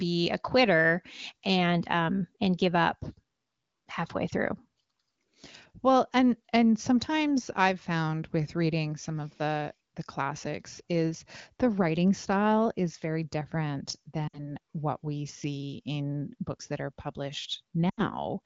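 Corrupted radio frames failed their checksum twice, so the AMR-WB decoder filled the gaps with lost AMR speech frames, repeating the last good pitch and vocal tract settings at falling gain. At 14.28 to 14.51 s, a gap of about 60 ms (consistent with three 20 ms frames) makes the speech smear and thin out before it recovers rough. At 17.90 to 18.06 s, an 80 ms loss fades more fully toward silence, quickly, as wideband does.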